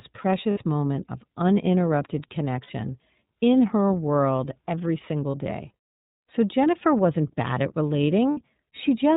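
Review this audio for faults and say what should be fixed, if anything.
The whole clip carries iLBC codec damage: speech is band-limited to 4 kHz and sounds plainly rough and synthetic, which fits iLBC's 30 ms, 13.33 kbps mode. A spectrogram shows nothing above 4 kHz and smeared harmonics. Sending at a wideband codec's rate would prevent it.

Lost iLBC frames leave short gaps filled with a held, buzzy vowel at 0.51 s (before "moment of uninterrupted"), 2.63 s, 5.31 s (after "in her world every") and 8.31 s (after "wasn't bad at"). Each gap lasts about 60 ms, except 30 ms at 5.31 s. The decoder repeats the last pitch cycle with added noise. The waveform shows periodic repeated cycles, and the spectrogram shows flat, steady harmonics. A jitter buffer or forward error correction would prevent the losses.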